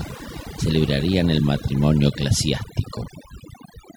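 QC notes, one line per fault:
Throughout: overdone noise removal. The noise reduction is set too strong, so frequency bands near the noise estimate are pulled far down or cut. Quiet parts of the speech vanish with them, leaving a lowered background that breaks up into twinkling specks.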